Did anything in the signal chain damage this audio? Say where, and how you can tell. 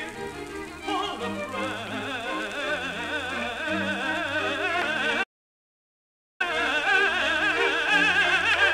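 Yes: a playback stall at the playback stage. The sound cuts off at 5.23 s and stays silent until 6.41 s, a gap of about 1.2 s, before resuming. On a waveform this is a flat line; a spectrogram shows a blank column. The player likely ran dry or was blocked.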